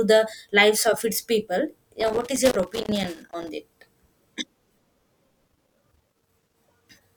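At 2.00 s the speech breaks into loose connector crackle that runs until 3.49 s, and it returns from 5.48 s to 6.58 s. A worn or dirty contact is making and losing connection, chopping the signal and adding pops from any DC on the line, so both stretches sound like irregular scratching. In the waveform these show as ragged dropouts with sharp spikes; on a spectrogram, as scattered full-height vertical streaks.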